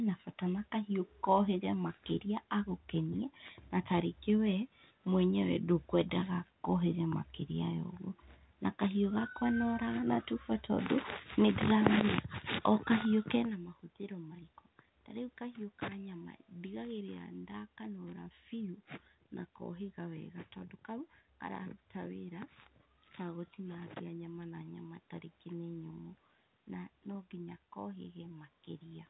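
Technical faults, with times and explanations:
No technical faults, with times and explanations, to report.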